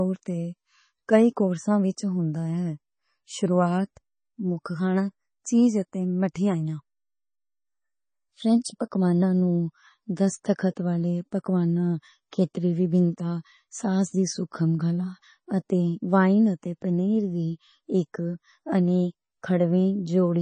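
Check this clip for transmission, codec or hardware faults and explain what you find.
One fault runs through the whole speech clip. From start to finish the sound is dull, with nothing above 9.4 kHz, and heavily watery and swirly, with chirpy s sounds. The likely cause is MP3 compression at a bitrate around 24 kbps. Short of bits, the encoder cuts the treble and drops weak frequency lines that flicker from frame to frame.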